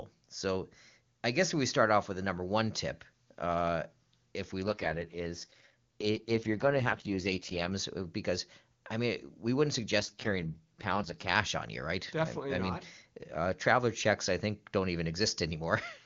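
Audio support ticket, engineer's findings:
AMR rate drop, twice: 4.64–7.71 s (after "tip uh if we", recovers by "uh because I mean") and 9.99–11.36 s (after "I mean we wouldn't", back by "on you right"). The AMR-WB link steps from 23.85 down to 6.6 kbit/s, so speech goes rough and raspy with no band loss or gap.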